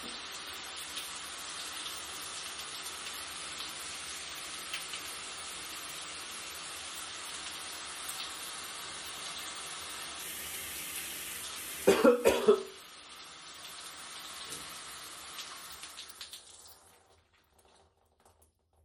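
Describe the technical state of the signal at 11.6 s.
At 11.56 s the sound skips forward: a very brief slice, roughly 20 ms, drops out and the material on either side is butted together with no gap of silence, so the flow jumps abruptly. This is audio missing between chunks, likely from a recorder or processor handling the signal in blocks of 6.0 s and losing a short piece as it closes one block and opens the next, then splicing the two edges directly.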